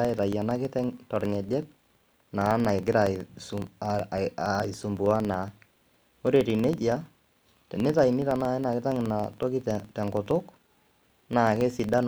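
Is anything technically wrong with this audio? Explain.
Yes, there's a filter restarted on every block, running right through the speech. The filter drops its state at each block boundary and starts again from silence, so each block opens with a small transient. That gives a steady tick or buzz at about 21.5 Hz, which fits a 2048-sample block, and it gets louder and quieter along with the speech level.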